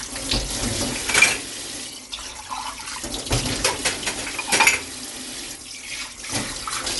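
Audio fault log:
Throughout: Dolby Digital compression, likely from a low bitrate near 64 kbps. Nothing above 11.4 kHz, with rough, fluttering fill noise around tones, unlike a clean low-pass.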